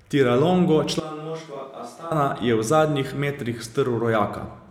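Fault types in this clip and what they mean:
Switch to a distant microphone: From 1.0 to 2.11 s the voice suddenly goes roomy and hollow, thinner in the low end and roughly 10 dB quieter, with background noise rising to about 25 dB below the speech. At 2.11 s it snaps straight back. That abrupt jump in and out likely means the close mic dropped out and the recording fell back on one much farther away, such as a camera mic.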